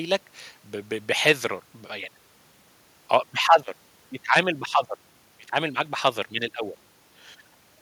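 No technical faults can be heard anywhere in this recording.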